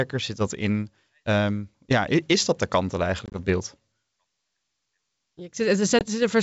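Around 3.26 to 3.38 s there's packet loss on what sounds like an ADPCM call: about 50 ms of speech drops out as several short, hard-edged silent gaps, none longer than 20 ms, which fits roughly five lost packets. Each time the decoder's predictor and step size lose track of the sender's, so the speech comes back slightly distorted before settling. A smaller 20 ms hole at 5.99 s does the same.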